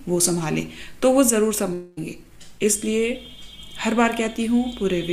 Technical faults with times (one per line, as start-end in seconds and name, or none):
1.73-1.99 long network dropout